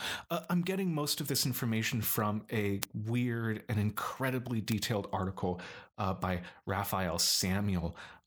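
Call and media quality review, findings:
Bit error spikes, single sharp ticks at 0.44, 2.83, 4.72 s, peaking about −24, −6, −12 dBFS; flipped bit in memory or digital link. One or two samples, no gap or smearing, unlike packet-loss clicks.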